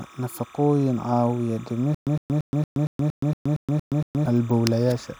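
From start to finish, timecode bleed sits behind the speech: a steady chirping warble alternating between roughly 1 kHz and 2 kHz, running at 29.97 frames per second and about 25 dB below the signal. That points to linear timecode leaking in from an adjacent track or cable.

From 1.95 s to 4.26 s there is a stutter with silent gaps. A 108 ms fragment repeats ten times, each followed by 123 ms of digital silence, on an even 231 ms cycle. It likely comes from a stalled stream replaying its last fragment before running empty, so the audio due in that span is lost.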